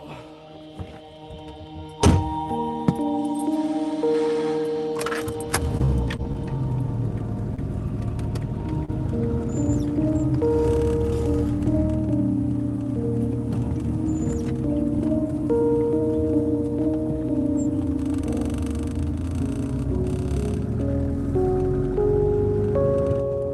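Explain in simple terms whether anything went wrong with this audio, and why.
Three separate glitches are audible, all typical of audio sent over an internet call.

From 5.77 to 6.48 s there is repeated packet loss, which gives a robotic sound. Six small chunks of audio failed to arrive in time across this stretch, the longest about 30 ms. Each time, the receiver patched the hole by extending the sound just before it, and about a sixth of the stretch is patched. The rapid string of patches makes the sound choppy and robotic, with bits of it missing.

At 7.56 to 7.59 s there is a short stall from a late packet. One chunk arrived about 16 ms late, so the receiver briefly held the last sound until it turned up, then carried on from the same point. Nothing is lost. The only trace is a sound drawn out a fraction too long, with a faint buzz.

At 8.85 to 8.90 s there is a short concealed packet loss. 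About 20 ms of audio never arrived, and the receiver filled the gap with roughly 28 ms of made-up continuation before blending back into the real signal. This shows up as a quick smear or wobble, and a very short sound there can drop out entirely.

All of this passed through an Opus call codec, whose top end stops around 12 kHz.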